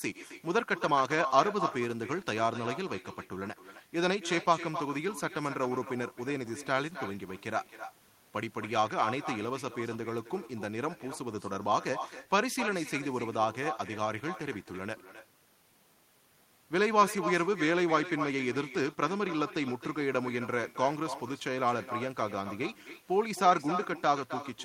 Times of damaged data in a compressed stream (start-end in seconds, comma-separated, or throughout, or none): none